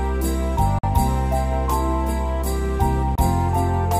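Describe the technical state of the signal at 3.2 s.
A Bluetooth dropout runs from 3.15 to 3.18 s: the sound cuts to silence for about 23 ms, then resumes further along, as if it had kept playing. This is likely a single audio packet that missed its delivery window to the headphones.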